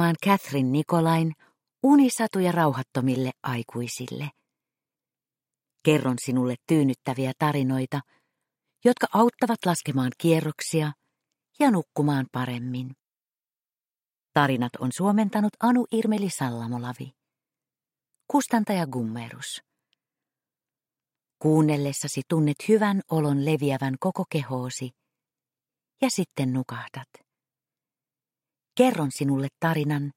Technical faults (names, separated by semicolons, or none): none